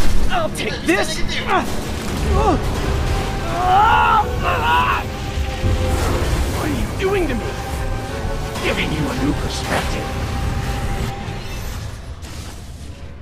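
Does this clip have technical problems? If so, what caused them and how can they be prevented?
No, nothing in the recording points to a technical fault, so there is no cause to trace and nothing to prevent.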